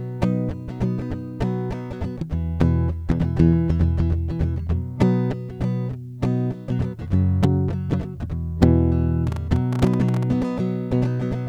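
From 9.27 to 10.24 s a train of clicks rides over the music: roughly fifteen sharp ticks at about 13.6 per second, spaced unevenly, each peaking a little above the music itself. They share much the same shape, which is what separates them from random vinyl-style crackle, and the sound underneath carries on without gaps, unlike dropouts. The likely cause is interference from nearby equipment or a faulty connection or power supply, injecting repeated pulses into the signal.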